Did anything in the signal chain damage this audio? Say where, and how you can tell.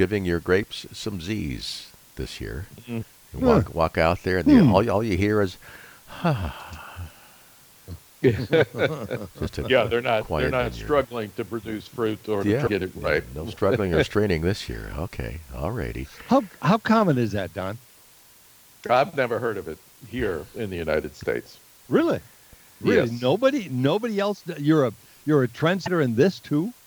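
Yes, in the codec stage: a likely broken MP3 bit reservoir after dropped frames garbles the sound for about one 26 ms frame at 3.02–3.05, 12.66–12.69 and 25.85–25.88 s.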